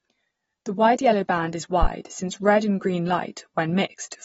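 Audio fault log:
Throughout: AAC compression. The speech is dull and smeared, with plainly audible codec damage and nothing above 7.7 kHz. This is likely a low-bitrate AAC-LC encode, consistent with about 24 kbps, where the encoder lowers its cut-off and coarsely quantises or drops bands to save bits.
1.83 to 1.89 s: phantom power thump. A deep low-frequency thump dies away within about 13 ms. A supply voltage switched on the live input sends a step through the coupling capacitors, which then discharge quickly and produce the short bump.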